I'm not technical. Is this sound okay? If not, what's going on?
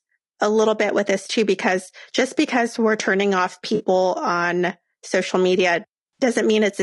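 No, not quite. The whole recording sounds rough and grainy, with a thin, slightly artificial edge on the higher sounds. That points to low-delay AAC compression, the squeezed format video calls likely use, which trades detail for very quick delivery.

There are also two brief glitches from AAC frame loss with concealment. At 3.75 to 3.83 s, right after "because we're turning off", and at 6.18 to 6.23 s, after "on social media", bits of audio went missing. The player patched them over with a smeared, noisy blip.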